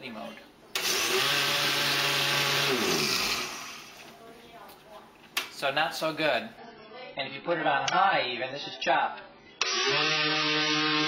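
At 6.57 s the adaptive stream switches to a lower bitrate and stays there until the end at 11.08 s. The change is sudden, with no gap. Treble above 6.8 kHz vanishes and codec artefacts thicken. This fits a fall from 96 to 12 kbit/s AAC.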